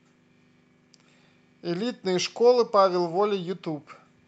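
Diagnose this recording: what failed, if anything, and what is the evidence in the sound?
Nothing failed; the call path sounds as expected.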